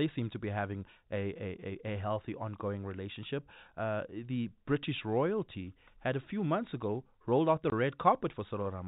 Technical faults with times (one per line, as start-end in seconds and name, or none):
7.70 packet loss filled with silence